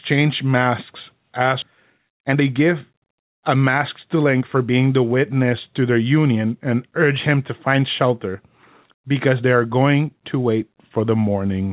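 At 1.62 s, right after "masks as", there is a skip ahead. About a second of speech never plays. It was dropped while later audio was already waiting. The two sides join almost directly, with no gap, so the speech jumps forward abruptly.

From 1.67 to 4.79 s, just before "the witness to their", comes a jitter buffer speed-up. The buffer still held too much audio, so it trimmed many short pitch-period slices, about 0.4 s in total. Speech runs about 12% fast at unchanged pitch and sounds hurried. Throughout, the band stops at 4 kHz, as expected from the G.711 call codec.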